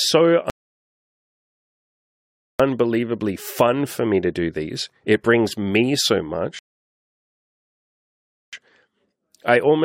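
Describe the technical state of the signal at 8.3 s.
At 8.3 s you're in the middle of a rebuffering stall that runs from about 6.59 to 8.53 s, right after "brings me so". The player ran dry of downloaded audio, so the speech drops to dead silence, then picks up exactly where it left off. Nothing's missing, just roughly 1.9 s of dead air added.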